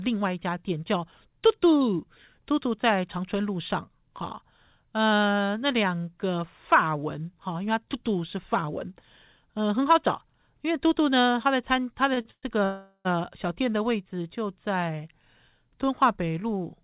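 At 12.14 s and 12.21 s there are two short stalls from a late packet. Each time the jitter buffer ran dry and the receiver stretched the last sound, by 27 ms and then 41 ms, giving a held syllable with a slight buzz or dip before the speech carries on with nothing lost.

Two call audio freezes follow, from 12.31 to 12.45 s and from 12.65 to 13.07 s. The last sound continues as a fading buzz or hiss, about 50 ms and 30 ms of it silent, then the speech resumes where it stopped, inserting 118 ms and 402 ms of delay. The likely cause is packets held up in transit.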